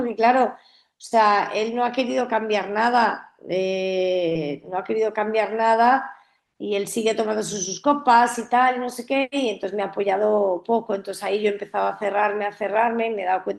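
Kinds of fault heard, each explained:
Short concealed packet loss: around 4.29 to 4.38 s, a brief gap in the speech where audio arrived too late to decode, with a second overlapping dropout near 4.33 to 4.37 s. Each missing stretch is about 20 ms, and the receiver papered over it by extending the preceding sound, then blended back into the real signal. The result is a quick smear or wobble lasting under a tenth of a second.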